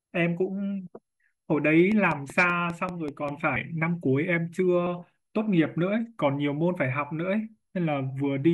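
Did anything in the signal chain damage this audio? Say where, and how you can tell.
Yes. Compressed frames were skipped at the codec stage, at 0.87, 3.56 and 4.86 s. Each time about two 26.1 ms frames, roughly 50 ms of speech, vanish. The sound jumps forward with a soft smeared blip, seen on a spectrogram as a brief smudge, not a sharp line.

A train of clicks runs from 1.92 to 3.29 s: about seven near-identical pops at a regular 5.12 per second, peaking about 5 dB above the speech, likely from interference in the analogue wiring or interface. They show as evenly spaced vertical lines and waveform spikes.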